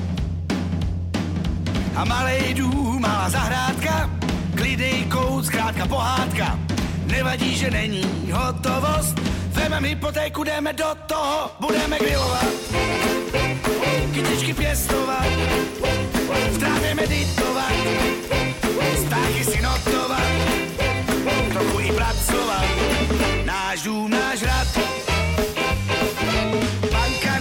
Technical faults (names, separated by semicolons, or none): word clock ticks